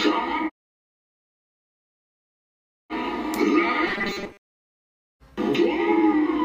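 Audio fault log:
3.87–4.47 s, robotic sound from repeated short buffers: for most of this stretch the sound turns into a rigid, metallic buzz fixed at 200 Hz that still roughly traces the underlying contour. The likely cause is audio arriving too seldom, with the playback looping a slice of about 5 ms while real material is skipped. Unlike a stutter or dropout, the result is a steady, pitch-locked drone.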